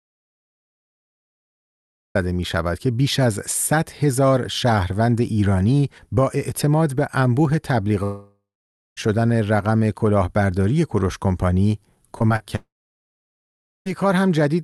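The clip opens in complete silence, with no room tone at all, and the speech only starts at 2.15 s. This audio dropout to silence was already under way when the recording began. It likely came from the input being lost, while the recorder kept writing silence.

From 8.03 to 8.99 s, the speech breaks into a fading buzz and then dead silence for about 0.55 s before resuming further on. This is a long network dropout. Nearly a second of audio likely never arrived, and the receiver stretched the last sound until it died away.

At 12.19 to 12.22 s, 12.28 to 12.32 s and 12.36 to 12.42 s come three brief smears or wobbles. These are short concealed packet losses of 20, 20 and 40 ms. The decoder patched each hole by extending the preceding sound and blending back.

A second long network dropout follows at 12.56 to 13.88 s. A fading continuation gives way to about 1.18 s of silence, and 1.3 s of speech is lost.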